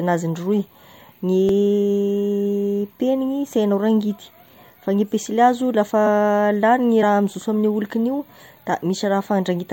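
Around 1.49 s, and again from 7.02 to 7.05 s, compressed frames were skipped: the decoder dropped whole frames, so the speech lurches ahead by roughly 20 ms, then about 40 ms.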